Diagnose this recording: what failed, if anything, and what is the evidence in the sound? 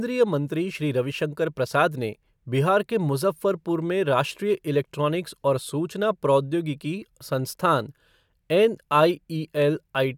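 Nothing failed: no stage in the chain, from capture through playback, leaves an audible mark on this speech recording.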